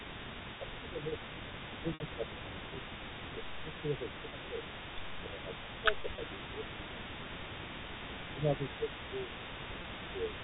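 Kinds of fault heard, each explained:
Echo leak: A faint delayed copy of the speech trails it through the whole clip by about 314 ms, sitting roughly 10 dB below the direct sound. The likely cause is an echo canceller on a loudspeaker side that let part of its microphone pickup slip back down the line. On a spectrogram each syllable's harmonic pattern reappears a third of a second later, dimmer. The waveform shows small ghost bursts after each main burst.
Speech suppressed in double talk: The speech level sags in stretches where the two sides overlap. It drops by around 10 dB at worst between 0.08 and 2.83 s, and by about 5 dB in the later spans at 3.54 to 4.56 s, 5.19 to 7.42 s, 8.29 to 9.33 s and 10.11 to 10.35 s. This likely comes from an echo canceller that could not separate its own talker from returning echo and turned both down. The waveform envelope dips abruptly, and on a spectrogram the bands dim together.
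Packet loss with pitch repetition: Audio dropped out at 1.94 s for 60 ms, which fits three 20 ms packets. Single 20 ms losses follow at 4.30 s and 9.82 s, and two scattered 20 ms losses fall between 6.02 and 6.18 s. The receiver bridged each gap by repeating the last pitch period, heard as a brief held, buzzy tone. The longest gap fades before the speech returns. On a spectrogram the harmonics freeze into flat lines, and the waveform shows identical repeated cycles.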